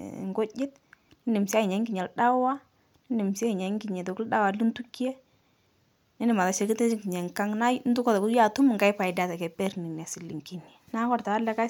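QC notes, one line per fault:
6.32–9.70 s, pre-emphasis left on: for this stretch of speech the treble rises sharply and the sound turns thin, bright and hissy, with sibilants standing out harshly before it returns to normal balance. The shelf matches the CD 50/15 µs curve, with the level at 10 kHz about 8 dB above 1 kHz, so the boost applied before storage was never undone by its mirror-image cut. A spectrogram shows a clear step up in energy above roughly 3 kHz confined to this span. The waveform looks spikier, with sharper transients.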